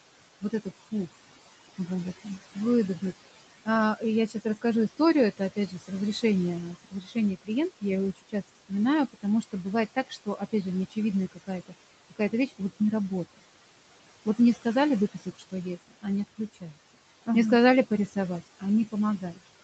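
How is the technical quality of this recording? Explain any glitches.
The recording has audible noise suppression problems: a constant processing artefact in the background and several passages where the suppressor eats into the speech. The audio is band-limited to 8 kHz, consistent with a low-bitrate Opus call path, and room noise sits about 15 dB below the speech.

Noise suppressor artifacts run through the whole clip. The suppressor estimates the steady background and pulls those frequency bands down by about 17 dB, recalculating frame by frame. Because the gain keeps changing, the residual noise does not stay level. It drops away in the gaps and comes back up beneath the speech.

Speech cut by the noise suppressor happens in three stretches. From 3.51 to 12.6 s, just before "не работает", about a second and a half of speech in total is turned down, by as much as about 19 dB. From 14.38 to 17.27 s a few tenths of a second are hit, by up to about 18 dB. 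From 18.07 s to the end the drop reaches about 12 dB. In each case the suppressor misread low-level speech energy as noise and attenuated it along with the background, so soft consonants and word tails sound swallowed or faded.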